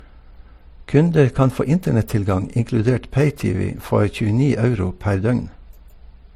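Speech with transcoding between lossy codecs throughout. Nothing sounds above 18.4 kHz, and two layers of artefacts mix. This likely comes from a low-rate MP3 followed by HE-AAC.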